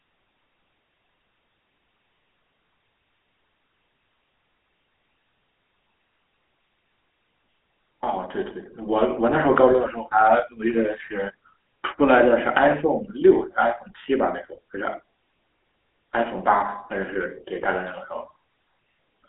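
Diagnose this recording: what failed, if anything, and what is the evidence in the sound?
GSM full-rate codec damage runs throughout, a codec-stage failure. The speech is confined to a telephone band near 250 Hz to 3.4 kHz, nothing above 3.8 kHz, with plainly audible buzzy, gravelly roughness. The codec's pulse-driven vocal-tract model and decimated excitation, fitting a 13 kbps coder, cause this.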